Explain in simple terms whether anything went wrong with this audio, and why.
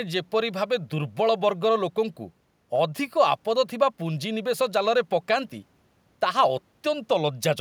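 Nothing went wrong here.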